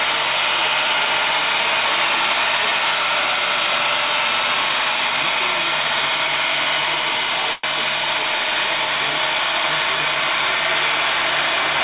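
At 7.53 s the sound briefly stalls into a short fading buzz lasting about 0.1 s, then resumes exactly where it left off with nothing skipped. This is a call audio freeze, likely from delayed packets draining the jitter buffer, leaving the receiver to stretch the last sound while waiting.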